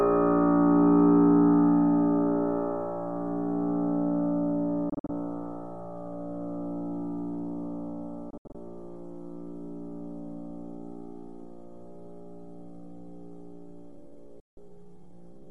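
Everyday sound with three digital broadcast dropouts. The receiver mutes with quick 3 ms fades when frames fail. From 4.90 to 5.10 s, 120 ms goes missing in short holes (longest 48 ms). From 8.30 to 8.55 s, 144 ms is lost in holes up to 72 ms. From 14.40 to 14.58 s, there is one solid 168 ms gap. The hole sizes fit frames of about 24 ms. The gaps are clean silence, not clicks or repeated audio, and the sound resumes further on, so what was sent in between is gone.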